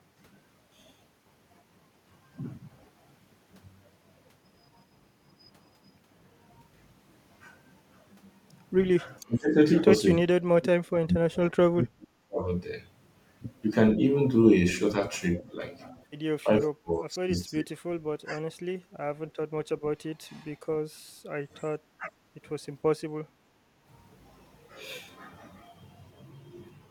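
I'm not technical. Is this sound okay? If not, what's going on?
No, there are three distinct problems here.

The main one is speech suppressed in double talk. The talker's voice gets pulled down while the other end of the call is also talking, at 9.2 to 9.56 s, 10.25 to 12.42 s, 15.52 to 15.61 s, 16.44 to 17.82 s, 18.22 to 18.45 s and 21.98 to 22.15 s. The likely cause is the echo canceller getting confused when both sides talk at once. It can't tell the talker apart from the echo of the far side, so it turns everything down. The long stretch around 10 to 12 s and the one around 16 to 18 s sink almost to nothing. The short blip at 15.5 s is only a slight dip.

There's also one lost LE Audio frame at 17.15 s, a single 7.5 ms gap in the Bluetooth link. The decoder filled the hole by guessing from the sound just before it. That leaves a tiny smeared, noisy flicker instead of a clean click. 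It lands inside the 16.44 to 17.82 s dip.

Finally, there's background gated by the echo canceller at 20.9 to 21.29 s and 23.66 to 23.83 s. While the far side was coming out of the loudspeaker, the canceller clamped the microphone down. The room sound briefly drops away, more noticeably in the first one, then comes back once it lets go.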